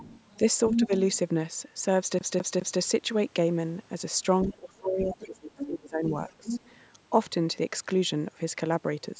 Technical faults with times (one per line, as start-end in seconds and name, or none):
0.00-0.38 other side's voice leaking through
0.69-1.18 other side's voice leaking through
0.71-0.91 speech suppressed in double talk
2.19-2.81 CD stuck on one turn
4.45-6.05 speech suppressed in double talk
5.11-5.25 other side's voice leaking through
5.57-5.67 other side's voice leaking through
6.29-6.72 other side's voice leaking through
6.38-6.50 speech suppressed in double talk